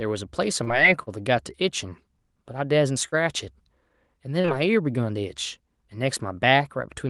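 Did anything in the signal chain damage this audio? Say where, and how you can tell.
Yes. The damage happened on the network leg of the call. Short concealed packet loss occurs three times, at 0.63 to 0.70 s, 3.08 to 3.18 s and 4.41 to 4.47 s. In each case about 40 ms of audio never arrived. The decoder filled the gap by extending the last sound for roughly 35 ms, then blended back into real audio. You hear a brief smear or wobble, and a short sound can drop out.

There is also one short stall from a late packet, at 1.03 to 1.10 s. Here the packet was late, not lost. The jitter buffer ran dry, so the receiver held the last sound for 40 ms until the packet arrived. Then it resumed from the same point. Nothing is missing, but one sound lasts too long. The playout delay grew by 40 ms as a result. All of this rides on an Opus call stream with its top end cut at 12 kHz.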